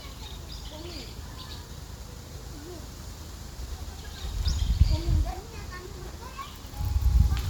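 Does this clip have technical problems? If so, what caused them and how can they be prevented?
Yes. The whole clip has generation loss. It has a swirly, hollow, smeared quality and soft, blurred attacks, worse than a single lossy encode would give. That likely comes from the audio being run through MP3 about three times, at a rate that fits around 96 kbit/s. Each decode and re-encode quantises again on a shifted frame grid, so the noise and spectral gaps pile up with every pass. To prevent it, keep a lossless master and encode to MP3 only once, at the very end.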